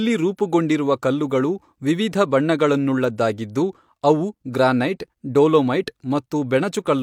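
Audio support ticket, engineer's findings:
No audible fault found anywhere in the speech recording; no component implicated, nothing to trace.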